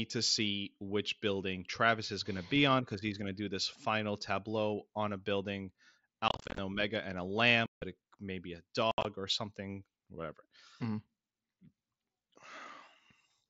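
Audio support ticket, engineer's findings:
Unconcealed Bluetooth headset packet loss over the wideband mSBC link: hard-edged holes, scattered crackle 6.28–6.58 s after "tableau on a building", solid gap 7.66–7.82 s before "it may be a", chop 8.91–9.05 s before "or something whatever". Lost headset packets are replaced by silence or an idle pattern. Unlike concealed loss, nothing is smoothed or repeated.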